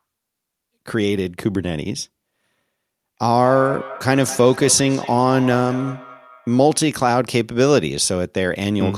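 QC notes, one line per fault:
3.40–6.86 s, feedback echo between two devices: speech returns roughly every fifth of a second, thin and ringing, peaking about 14 dB below the talker. A second device in the room replays this microphone's signal, which gets picked up again, and neither echo canceller removes it.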